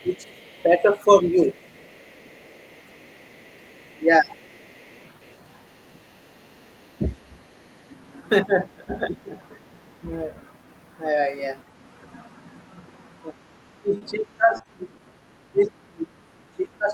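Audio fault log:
0.00–5.37 s, other side's voice leaking through: a faint second voice, about 35 dB below the talker, likely loudspeaker echo the echo canceller left in the microphone signal.
0.03–1.49 s, speech suppressed in double talk: the talker's level dips by up to about 15 dB for roughly a second, likely the canceller turning down both voices while both talked.
3.35–4.40 s, speech suppressed in double talk: the talker dips by up to about 20 dB for a few tenths of a second, likely suppression while the far side overlapped.
6.72–6.87 s, other side's voice leaking through: a brief faint scrap of another voice, about 40 dB down, likely residual loudspeaker echo that the canceller missed.
6.98–7.18 s, speech suppressed in double talk: a short dip of up to about 10 dB lasting roughly 150 ms, likely the canceller ducking the talker during overlap.
8.45–9.34 s, speech suppressed in double talk: the talker drops by up to about 15 dB for most of this stretch, likely the canceller misjudging the talker as echo.
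13.69–16.93 s, speech suppressed in double talk: the talker fades by up to about 25 dB through to the end, likely heavy suppression while both sides spoke.
13.97–14.03 s, short concealed packet loss: a brief smear where 40 ms never arrived and the receiver stretched the preceding sound to fill the hole.
14.57–15.23 s, repeated packet loss (robotic sound): choppy patches from four gaps of up to 20 ms, 80 ms in all and 12% of this span, each filled by extending the last sound.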